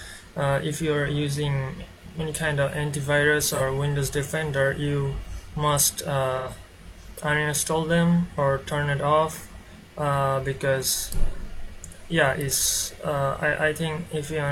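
The audio has two brief dropouts caused by AAC frame loss with concealment. The first runs from 3.49 to 3.62 s, and the second from 6.37 to 6.48 s. In each gap the decoder rebuilds the missing audio from the last good spectrum. This produces a short smeared, noisy or phasey patch instead of a hard gap. The first loss spans about 43 ms, which fits one lost frame. The second spans about 85 ms, which fits two.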